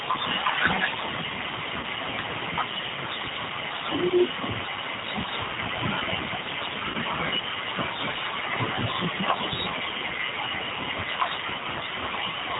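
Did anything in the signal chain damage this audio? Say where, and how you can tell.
Yes. The G.729 codec damages the whole clip. The speech is band-limited to 4 kHz, and the voice sounds slightly rough and synthetic, which points to G.729A at 8 kbit/s. The codec discards the waveform. It sends only a vocal tract filter, a pitch predictor and a few pulses for each 10 ms frame, and the decoder rebuilds an approximation of the speech from those. That loss of detail is plainly audible from start to finish.

VoIP packet loss, concealed by the speech codec, appears at three points in the network stage: 1.79 to 1.86 s, 6.90 to 6.97 s, and 11.36 to 11.40 s. The first two gaps each cover about 40 ms of lost audio, which fits two missing packets. The third covers about 20 ms, which fits one. In each gap, the decoder stretches the last pitch and filter into a buzzy tone or coloured noise that fades. 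The voice then sounds weak for a short time after the gap, because each frame is rebuilt from the one before it.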